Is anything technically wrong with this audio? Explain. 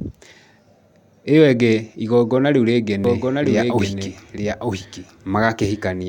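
Yes. From 3.04 s to the end, a doubled audio track appears. A second copy of the speech trails by about one second, a few decibels quieter. It likely comes from a slower capture path. The copy starts abruptly, with no decay or room colour.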